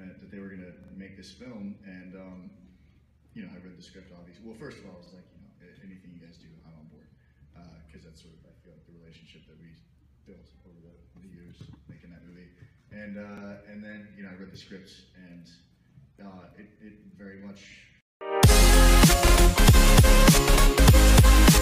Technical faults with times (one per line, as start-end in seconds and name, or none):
0.84-0.93 repeated buffer
5.06-5.11 repeated buffer
13.37-13.42 repeated buffer
19.27-19.32 repeated buffer